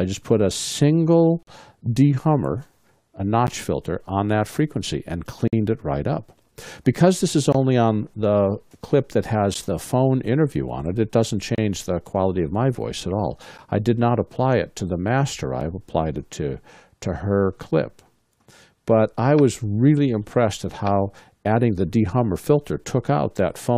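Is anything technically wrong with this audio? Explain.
Yes, there are gaps between stream segments at 1.43–1.47, 3.47, 5.48–5.53, 7.53–7.55, 9.54, 11.55–11.58, 13.58 and 15.61 s. Mistimed 2-second segments leave hard-edged silences of about 4 to 50 ms. Unlike dropouts, no audio is lost; the sound resumes exactly where it stopped.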